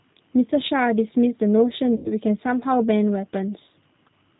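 From start to finish the speech sounds slightly rough and synthetic, with nothing above 4 kHz and a plainly audible coarse edge. That points to the G.729 codec, whose character fits an 8 kbit/s stream. Instead of carrying the waveform, it rebuilds each 10 ms frame from a vocal tract filter, a pitch predictor and a few sparse pulses. Those crude pulses are what roughen the sound.

At 1.96 s the speech smears into a stretched sound that sags in level until about 2.08 s, and it stays weak and distorted a little beyond that. This is VoIP packet loss concealed by the speech codec. About 90 ms of audio went missing, which fits roughly three lost packets. The decoder filled the gap by repeating its last pitch and filter at falling gain. Because each frame leans on the one before, recovery lags once packets arrive again.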